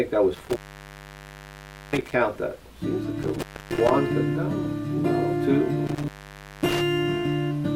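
Intermittent contact interrupts the audio at 0.35–2.14 s, 3.23–3.91 s and 5.87–6.81 s, opening for 1.37, 0.28 and 0.55 s. The waveform drops to near-flat hiss between crackly spikes.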